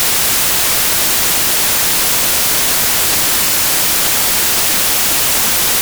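Samples built from the wrong bytes run throughout: misassembled bytes put the fast-changing low bits on top, giving loud, harsh broadband noise.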